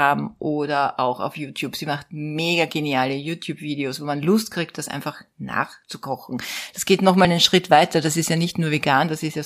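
Compressed frames skipped at 7.25 s: the speech jumps ahead by roughly 30 ms, which fits a single lost frame of about 32 ms that was missing or rejected by the decoder.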